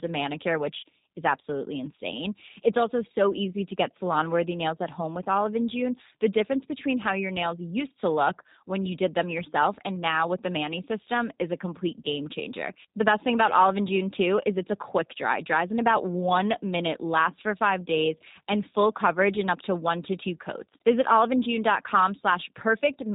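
Speech runs through a G.729 codec for the whole clip. Nothing passes above 3.8 kHz. Pulse-coded rebuilding leaves it plainly rough and synthetic, which fits about 8 kbit/s.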